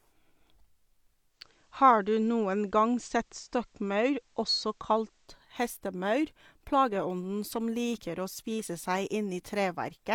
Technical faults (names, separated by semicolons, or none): digital radio blending to analogue